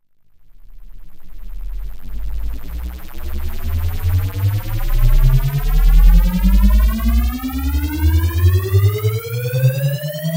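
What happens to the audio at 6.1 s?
Nothing goes wrong at 6.1 s; the sound carries on intact through that moment with no dropout, click, distortion or other fault.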